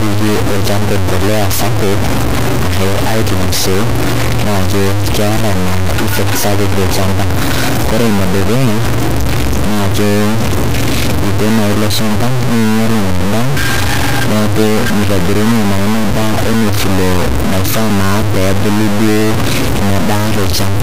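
Right through the speech it sounds heavily grainy, most likely low bit depth without dither: only about three-bit steps, truncated, so gritty distortion sits roughly level with the signal.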